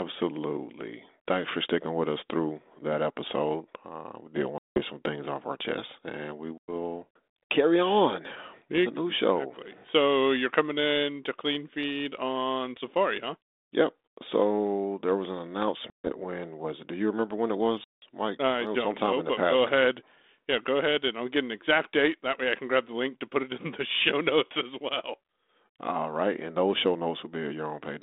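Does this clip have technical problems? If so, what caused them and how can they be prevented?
Yes: packet loss on an ADPCM call leaves hard-edged silent gaps at 4.58 s (180 ms), 6.58 s (100 ms), 15.9 s (140 ms) and 17.84 s (180 ms). Each gap knocks the decoder's adaptive predictor and step size out of step with the sender's, so speech resumes briefly slightly distorted. Packet loss concealment plus a jitter buffer and a more reliable link would prevent it.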